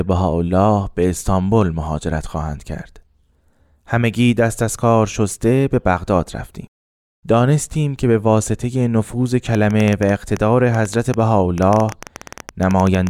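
Something in the chain, likely electrical interference from nearby equipment or a faulty connection or power supply, starts injecting short pulses into this speech recording at 9.55 s and keeps going until 13.08 s, right at the end. The result is a train of clicks: around thirty similar pops at roughly 9.4 per second, spaced unevenly, standing out by about 10 dB over the speech and ticking through the pauses as well.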